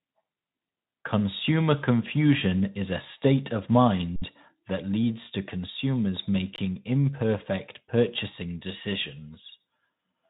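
Underrun with held sample at 4.16 s and 6.56 s: the buffer emptied, the output froze flat for 60 ms and 20 ms, then resumed softly.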